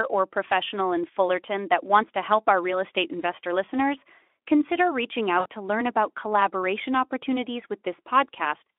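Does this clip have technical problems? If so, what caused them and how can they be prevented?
Yes. After "investor listeners consider reaching", from 5.39 to 5.46 s, there is VoIP packet loss concealed by the speech codec. About 60 ms went missing, which fits three lost 20 ms frames. The Speex decoder stretched its last pitch and filter into a fading sound before "to learn about collaboration". Unlike a plain dropout, there is no silent gap or click, and the sound stays weak briefly after packets resume. Forward error correction, a jitter buffer, or a less congested network path would prevent it.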